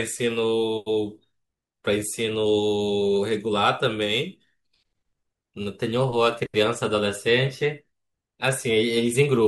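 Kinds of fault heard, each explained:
Crude rate conversion: From 4.02 to 6.64 s, samples in this speech are dropped or repeated with no filtering. The pattern fits a 48 kHz to 44.1 kHz change. It adds an inharmonic, gritty fizz, roughly 25 dB below the voice, following louder and brighter sounds.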